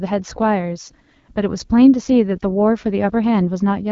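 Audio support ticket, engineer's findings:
AMR wideband (HD Voice) codec throughout, low-rate mode, consistent with 8.85 kbit/s. Sparse pulse excitation leaves the speech rough and raspy; the top band, to 7 kHz, is noise-filled.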